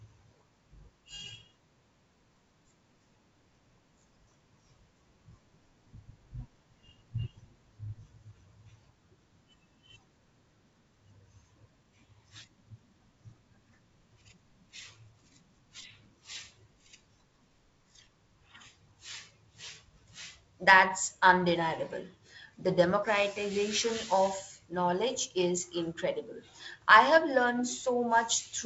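No technical faults can be heard in the speech. It carries the mark of G.722 wideband telephone coding at 48 kbit/s, with light coding texture and nothing above about 7.7 kHz.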